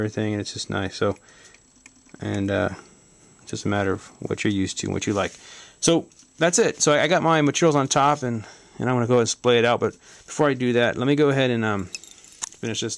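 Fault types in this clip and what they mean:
No technical faults can be heard anywhere in the clip.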